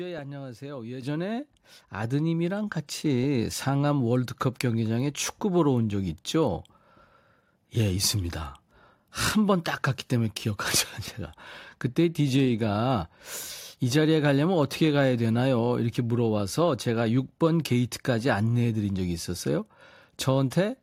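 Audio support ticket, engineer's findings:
Sudden level jumps at 1.02 s, 2.04 s and 3.06 s; speech and background noise floor rise together, no fade. Steps of about 8 dB, then about 4 dB, then about 2 dB, roughly one second apart. Microphone volume stepped up by call software's input gain control: device input volume raised in discrete increments after the mic read as too quiet, each step smaller.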